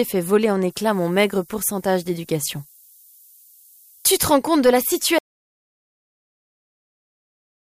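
From 0.7 to 4.22 s the audio shows low bit depth with noise shaping: an 8-bit requantisation leaves a thin hiss, roughly 25 dB below the signal, climbing toward the top of the band. At 5.19 s an audio dropout to silence begins and lasts to the end: silence with no room tone, likely from a lost input feed.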